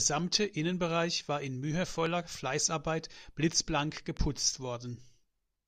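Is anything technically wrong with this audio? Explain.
Yes. The speech carries a loud pop in two places: a single pop from 2.06 to 2.08 s, and a pair of pops from 3.97 to 4.19 s. The first peaks well above the speech, roughly 15 dB over it, and the second pair roughly 10 dB over. Each is likely a voltage step or pulse, from a connector, a switch, static or a driver glitch, shaped by the downstream circuitry. The speech continues underneath each sharp, thumpy pop.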